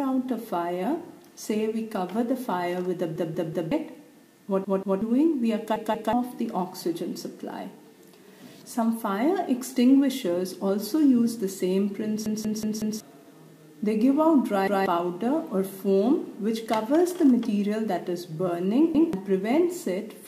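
Stuttering loops of a roughly 186 ms chunk, joined hard at each repeat, at 3.16–3.72 s, 4.64–5.02 s, 5.76–6.13 s, 12.26–13.00 s, 14.68–14.86 s and 18.95–19.13 s. This is a repeated buffer: fresh audio arrived late, so the device replayed its last block, which fits an 8192-sample buffer.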